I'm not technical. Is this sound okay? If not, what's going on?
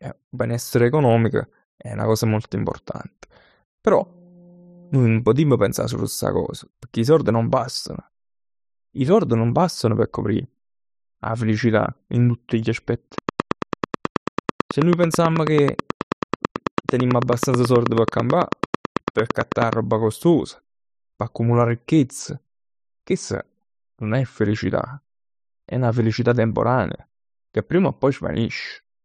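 No, there are two problems.

From 13.18 s to 19.74 s there is a train of clicks: a steady ticking, about 9.2 clicks per second at a regular pace, roughly seventy in all. They are loud against the speech and carry on through the pauses too. An evenly spaced pulse like this is likely interference from nearby equipment or a faulty connection or power supply, rather than anything in the room.

From 22.19 s to the end, there is a channel delay causing comb filtering. One of the two channels arrives a couple of samples late, a tiny fraction of a millisecond. When both are combined into one, the parts they share cancel at evenly spaced frequencies. With such a short delay, the first cancellation falls around 10 kHz, so the speech loses some of its crispness and sounds slightly dull.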